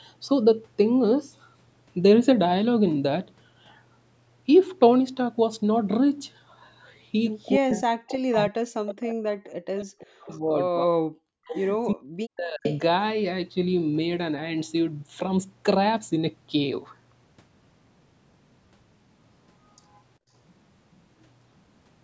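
From 7.57 to 11.34 s the speech keeps sinking and breaking up, for roughly 3 seconds in total, at worst down by about 40 dB. That's speech suppressed in double talk. Most likely both ends were talking at once and the echo canceller, unable to tell this talker from loudspeaker echo, just clamped everything. It does it again more briefly from 11.94 to 12.65 s, for about half a second.

Threaded through that stretch is an echo leak: short, delayed copies of the voice sneaking back at 8.88 to 9.02 s, 9.77 to 10.39 s, 11.47 to 11.60 s and 12.64 to 12.80 s. They trail the original by roughly 365 to 382 ms and sit about 10 to 20 dB under the speech, so you hear quieter scraps rather than a full repeat. The likely culprit is a far-end speakerphone whose canceller didn't strip out everything its mic picked up and sent the rest back.

Then at 20.19 to 20.31 s the room sound itself ducks for about 100 ms, by about 23 dB, before snapping back. 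That's background gated by the echo canceller: while the loudspeaker played, the canceller yanked the mic level down hard and released it a moment later. The call's mic processing also rolls off the deep bass and has nothing above 8 kHz, which is expected for this kind of path.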